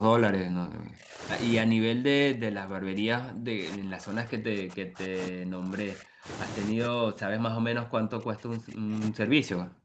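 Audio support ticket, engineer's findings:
Speech suppressed in double talk, three stretches: 0 to 1.23 s, 1.63 to 6.28 s, 6.71 to 9.84 s. The talker drops out in chunks, sometimes about 40 dB down, so it's nearly gone. Likely the echo canceller's suppressor on the near end: with both sides talking, it can't tell this talker from loudspeaker echo and clamps everything. Top end stops at 8 kHz, which fits an Opus wideband call path.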